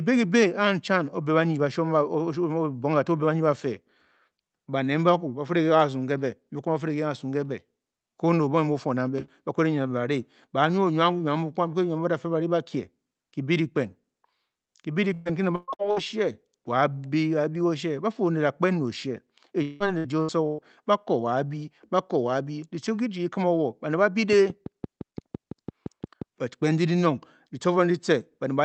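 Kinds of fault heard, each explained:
Repeated packet loss (robotic sound): Around 15.13–15.99 s and 19.62–20.61 s the speech breaks up four times in each stretch, with gaps up to 178 ms. About 40% of each span is patched by prolonging the previous sound, so it turns choppy rather than falling silent.
Train of clicks: From 24.33 to 26.23 s about ten similar pulses tick at a steady 5.8 per second, peaking about 10 dB above the speech. They likely come from interference or a faulty connection, and unlike packet loss they sit on top of intact speech without removing any of it.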